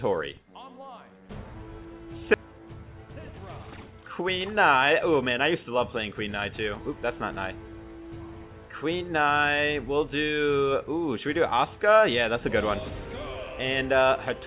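At 2.34 to 2.36 s the audio jumps abruptly forward, with about a second missing. This skip ahead happened because audio was dropped while later audio was already waiting, then the two sides were joined almost directly. From 4.21 to 5.78 s the audio runs hurried, about 7% fast, but keeps its pitch. This jitter buffer speed-up came from the receiver trimming short pitch-period pieces, roughly a tenth of a second in total, to reduce excess buffered delay. Throughout, nothing is heard above 4 kHz, which fits a narrowband call codec.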